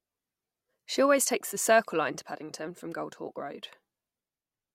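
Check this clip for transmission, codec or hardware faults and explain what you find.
No transmission, codec or hardware faults are audible anywhere in this speech clip.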